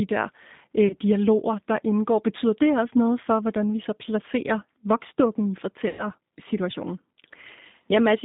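Throughout the clip the speech carries the sound of the G.729 codec, here the G.729A variant. Its rate points to 8 kbit/s, and the line band is limited to roughly 150 Hz to 3.7 kHz. The codec resynthesises speech from a short-term vocal tract filter, a pitch predictor and a sparse set of pulses per frame rather than sending the waveform itself. That damage is plainly audible as a rough, synthetic texture over a narrow, telephone-like band.

The clip also shows VoIP packet loss concealed by the speech codec. The first gap runs from 0.88 to 0.94 s, between "der øh" and "dialoger der indgår". About 20 ms of audio is missing, which fits a single lost packet. The second gap runs from 5.89 to 6.06 s, right after "så placerer voksdukken i". There about 100 ms is missing, consistent with five consecutive lost packets. In each gap the decoder extends its last pitch and filter settings at falling gain, so the missing stretch is replaced by a fading buzzy tone or coloured noise instead of the original sound.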